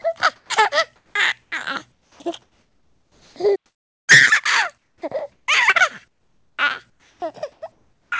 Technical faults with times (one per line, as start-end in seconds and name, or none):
0.02-3.36 sound chopped by the voice detector
3.55-4.10 playback stall
4.78-5.48 comfort noise in place of the background
4.98-5.02 onset clipped by the voice detector
6.08-8.12 comfort noise in place of the background